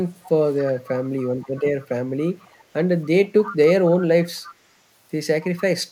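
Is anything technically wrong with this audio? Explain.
Yes, there is an echo leak in the speech at 0.23–0.29, 0.58–1.64, 1.80–1.87, 2.19–2.63, 3.04–3.08, 3.26–3.90 and 4.22–4.55 s. A faint copy of the voice trails it by about 280 ms, mostly some 25 to 35 dB down, rising to about 15 dB down at 3.26–3.90 s. The likely cause is a far-end loudspeaker whose echo canceller let part of the microphone pickup return, giving these delayed scraps.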